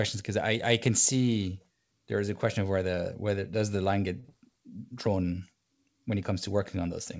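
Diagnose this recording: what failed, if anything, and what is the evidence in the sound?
Network and jitter buffer: a short stall from a late packet at 4.20 to 4.25 s. One sound is held about 40 ms too long, with a slight buzz or dip, because the buffer ran dry and stretched the last audio until the packet arrived. Playback then resumed where it had stopped, so nothing is lost.

Network and decoder concealment: a short concealed packet loss follows at 4.29 to 4.31 s, heard as a brief smear or wobble. About 10 ms of audio never arrived, and the decoder filled 13 ms by extending the preceding sound before blending back into the G.722 stream, which carries nothing above 8 kHz.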